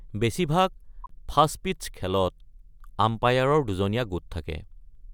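A short squeaky burst of noise at 1.04 to 1.11 s, peaking around -30 dBFS, is a corrupt frame decoded: bit errors across several frames misplaced spectral energy.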